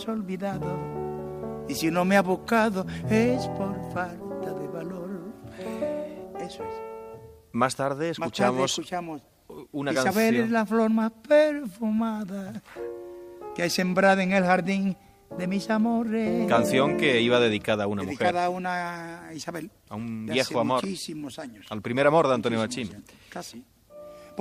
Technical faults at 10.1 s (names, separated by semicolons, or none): none